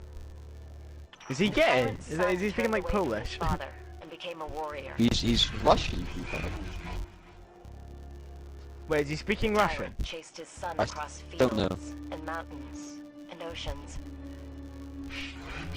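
From start to finish the sound carries a buzz at 100 Hz, the signature of a filter restarted on every block. Each block starts from silence rather than from where the previous one ended, so a small transient marks every boundary, ten-millisecond blocks by the rate. The buzz rises and falls with the signal's level. On a waveform, regular glitches appear every 10 ms. A spectrogram shows faint vertical striations and a comb of harmonics spaced 100 Hz apart.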